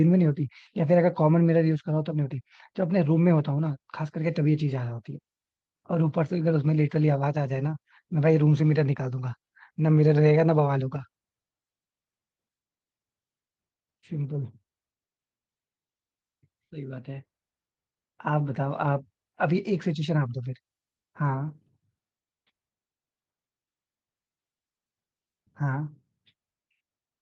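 No technical faults are audible.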